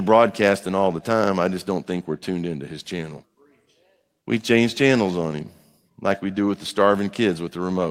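Listening to this speech recording, nothing stood out as a technical problem anywhere in it.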